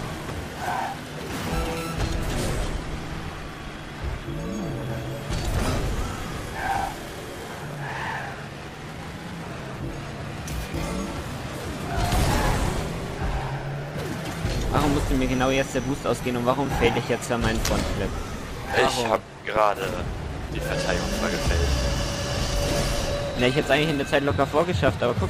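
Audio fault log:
No fault to log in this audio.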